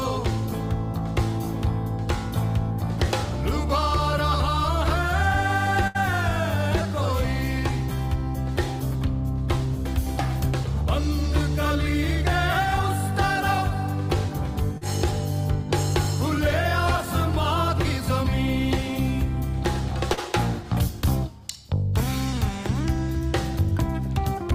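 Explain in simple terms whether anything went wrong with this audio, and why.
Yes, something went wrong, in two different ways. From 5.87 to 6.02 s there is a burst of packet loss. A run of audio arrived too late or not at all. The receiver stretched the last sound for about 70 ms and let it fade, so you hear a held buzz or hiss dying away. When the sound returns, about 60 ms of the original is gone.

At 14.78 to 14.83 s and again at 20.13 to 20.19 s there is short concealed packet loss. Each time, about 40 ms went missing. The receiver patched the hole by briefly continuing the previous sound and then blending back in. The result is a quick smear or wobble rather than an audible fade. It is roughly half the length of the earlier dropout.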